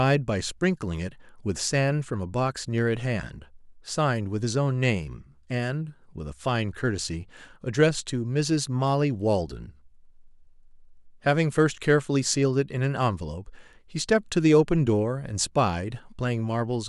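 Speech recording with no audible technical faults in its signal path.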